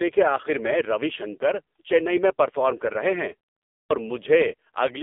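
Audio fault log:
throughout  AMR narrowband mobile codec: The speech sounds buzzy, thin and synthetic, with nothing above about 3.7 kHz and the low end thinned below roughly 250 Hz, as if heard over a phone line. The narrowband mobile codec rebuilds each 20 ms frame from a vocal-tract model fed by a few pulses. The heavy damage points to one of its lowest modes, near 5.9 kbps, which leaves too few pulses to carry natural texture.
3.69–3.90 s  clipped start after a pause: After a pause of about 0.37 s, the sound resumes abruptly with its opening cut away. About 212 ms is missing, so the speech begins mid-onset rather than building from its first sounds. The output device went to sleep during the short silence and had not fully woken or locked again when sound returned, so that first stretch was swallowed before playback resumed.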